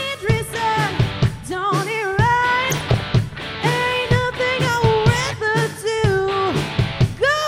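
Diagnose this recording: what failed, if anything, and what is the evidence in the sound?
DAB burbling, 2.60 to 3.00 s: weak reception let bit errors through error correction into MP2 codec data, putting short blips of noise in single sub-bands across 17 frames.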